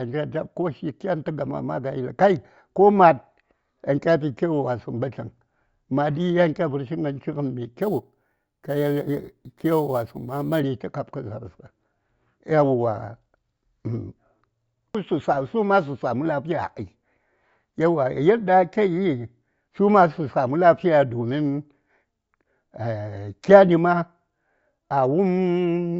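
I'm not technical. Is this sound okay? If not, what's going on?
No. From 7.82 to 10.60 seconds the speech picks up a thin, bright, metallic fizz that rises and falls with the voice. This is imaging from sample-and-hold upsampling: the audio was converted to a higher rate by simply repeating each sample, with no smoothing. That leaves mirrored copies of the voice in the high treble, starting around 8 kHz, which points to an original rate of about 16 kHz.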